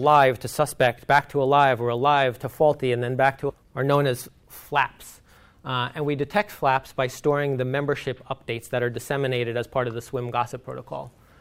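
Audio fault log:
3.49 to 3.51 s, skip ahead: playback jumps forward with no filled gap, so roughly 0.7 s of sound is missing and the two sides are joined almost directly. Audio that was already queued behind the dropped stretch was played straight away, taking about 0.7 s out of the playout delay.
4.15 to 4.44 s, jitter buffer speed-up: the sound runs at about 114% speed while the pitch stays the same, so it comes across as briefly hurried. The receiver cut several short pitch-period-length pieces in a row, trimming around 50 ms to bring its excess buffered audio back down.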